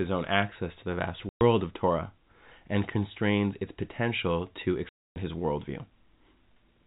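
At 1.29 s, after "access to the vast", and 4.89 s, after "constrains its potential to", packet loss filled with silence cuts 120 ms and 270 ms holes with hard edges, consistent with 30 ms packets.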